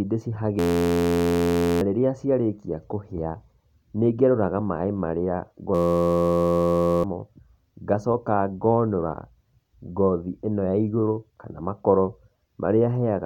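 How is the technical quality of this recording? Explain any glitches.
Two glitches spoil the speech, both from a system hang loop. From 0.59 to 1.81 s and again from 5.75 to 7.04 s, the machine stalled while the sound hardware kept replaying the same tiny chunk of its buffer. Each loop lasts 11.61 ms, repeating at 86.1 Hz, which fits a 512-sample buffer. Because the looped piece is so short, you hear a steady, droning buzz rather than a stutter, and roughly a second, then about one and a half seconds, of real audio goes missing.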